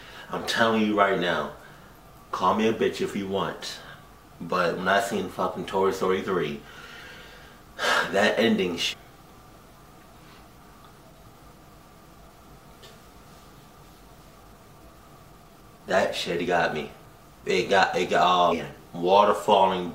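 Damaged data in a compressed stream throws the decoder off sync, causing brief blips at 2.81, 6.25, 8.92–8.94, 11.33 and 18.51–18.53 s.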